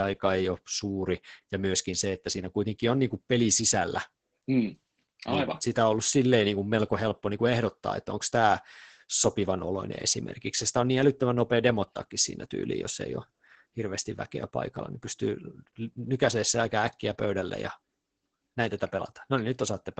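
It's a speech recording with Opus voice compression running the whole way through. Nothing gets past about 8.8 kHz, so it sounds muffled, and the coarse excitation coding makes the voice hoarse and a bit robotic. That heavy damage points to wideband SILK at roughly 10 kbps.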